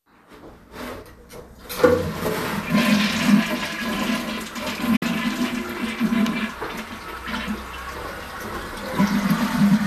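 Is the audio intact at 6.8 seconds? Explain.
Yes, the audio is intact at 6.8 seconds, with no fault affecting the sound at that point.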